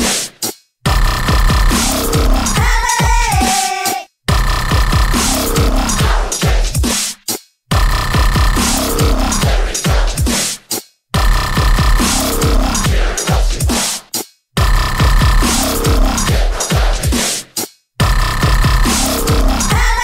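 The audio signal stays steady and intact all the way through, with nothing interrupting or disturbing it at any point.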